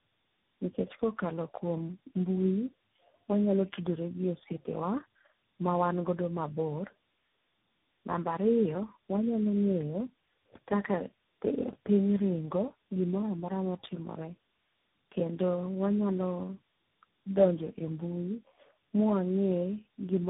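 From start to finish the speech sounds rough, muffled and warbly, with nothing above 3.8 kHz. This is tandem speech coding: the sound fits four speech codecs in a row, CVSD and low-rate AMR-NB, each re-coding the previous coder's already degraded output.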